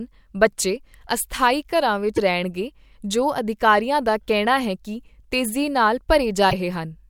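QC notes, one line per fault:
2.16–2.19 s and 6.49–6.54 s, broken MP3 bit reservoir: frames were likely dropped from the stream, so the next frame drew its borrowed bits from the wrong earlier data. The decoded speech skips ahead with a brief glitch of about 30 ms and 44 ms, around one to two 26 ms frames, just after "ਬੱਚੇ ਅਸਥਾਈ ਘਰਾਂ" and "ਹੈ ਕੀ ਤੇਜ਼ੀ ਨਾਲ".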